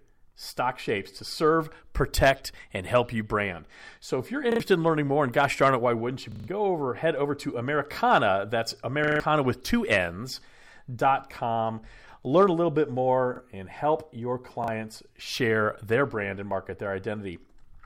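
Short stutters with hard joins at 4.52, 6.32, 9.04, 13.36 and 14.64 s, the ones at 6.32 and 9.04 s lasting longest at about 0.16 s, are a repeated buffer. Fresh audio arrived late, so a slice of about 40 ms replayed, and a little speech was skipped.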